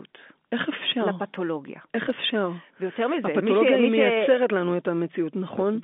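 No faults are audible anywhere in this speech.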